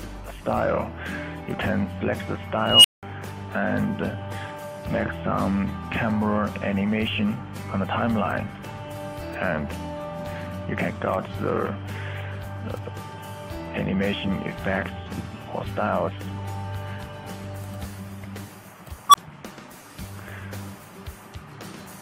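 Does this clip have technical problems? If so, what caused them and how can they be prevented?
Yes. An unstable filter occurs twice. A recursive filter fed bad coefficients let its output grow without bound, so each time it runs away the audio swells, clips, then overflows and drops out until the filter resets. From 2.62 to 3.03 s, a squeal around 3 kHz builds for about 0.22 s, then about 0.19 s of silence follows. From 19.09 to 19.15 s, a tone around 1 kHz builds over 45 ms, then cuts out for 15 ms. Validating coefficients for stability before loading them prevents this.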